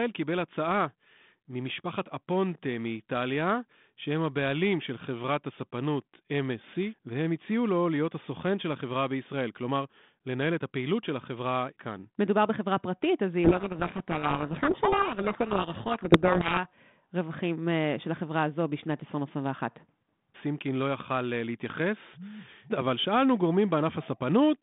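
From 13.44 to 16.59 s the speech is buried in harsh distortion. This is a codec payload misread: the G.726 code words arrive with their bit order swapped, so the decoder reads wrong difference values. The 32 kbit/s telephone band, roughly 150 Hz to 3.6 kHz, returns afterwards.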